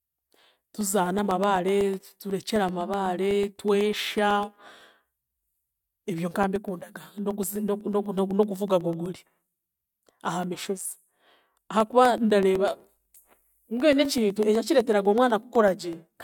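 From 0.06 s right through to 16.18 s you get periodic USB or driver dropouts: every 0.125 s, about a millisecond of the speech gets blanked to silence, so there's a steady tick running through it, eight a second, wherever there's signal.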